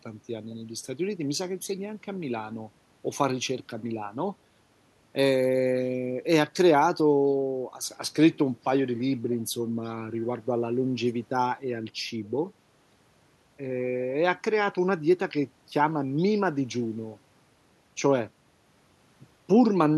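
No technical faults can be heard anywhere in this speech recording.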